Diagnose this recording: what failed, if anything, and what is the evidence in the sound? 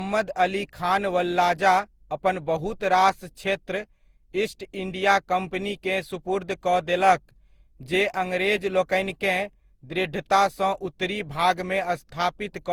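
The damage sits at the codec stage, all the way through the speech. It has that swirly, hollow, smeared quality, with consonant attacks blurring, and it's far worse than a single lossy pass at this bandwidth would give you, since content still reaches 20.2 kHz. That points to generation loss, likely from re-encoding around ten times through Opus at something like 64 kbit/s. Each pass requantises on a shifted frame grid, so the noise stacks up.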